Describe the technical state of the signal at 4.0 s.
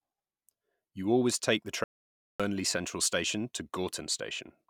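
At 4.0 s the speech signal is intact, with no audible fault at that moment.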